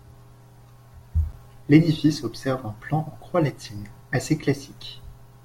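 At about 1.32 s the speech drops out for roughly 9 ms. That's a gap at a join of encoded pieces. The audio seems to have been encoded in separate chunks, with joins every 4 s, and stitched back together without trimming. The encoder's start-up silence and the padding on each chunk's final frame got left in. You hear a tiny hole with blurred edges, and then the speech picks up exactly where it broke off.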